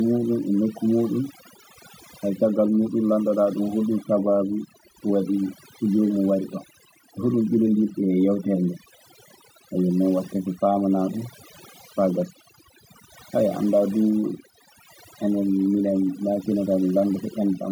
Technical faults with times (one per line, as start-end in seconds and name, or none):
0.00-17.71 overdone noise removal